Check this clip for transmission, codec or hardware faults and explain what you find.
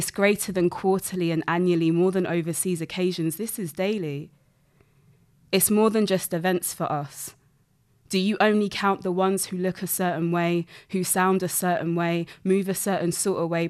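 No faults detected in the speech; nothing to report.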